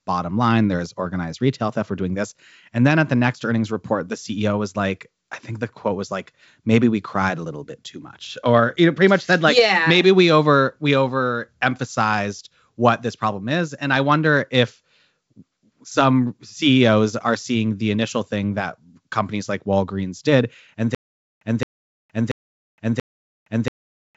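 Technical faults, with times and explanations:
20.95 s to the end, stutter with silent gaps: the same 218.5 ms burst of speech returns four times at an even 684 ms pace, each followed by about 465 ms of dead silence, and normal playback never resumes. The likely cause is a stalled player or stream that replays its last buffered fragment at each retry and then runs dry, so the audio meant for those seconds is lost. The G.722 wideband band limit near 7.7 kHz carries through the repeats.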